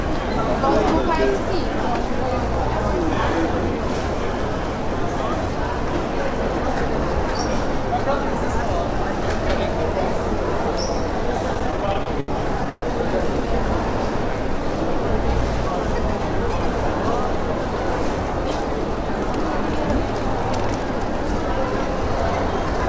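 From 11.54 to 12.84 s the sound drags and stutters, halting 14 times, with the longest hold about 130 ms. These are repeated stalls (stutter): packets arrived late or slower than playback, so the jitter buffer kept running dry, and each time the receiver stretched the last sound, fading it during longer waits, until data resumed. About 339 ms was filled this way, roughly a quarter of that stretch, with nothing lost. The audio stops at 8 kHz, consistent with a G.722 call codec at 64 kbps.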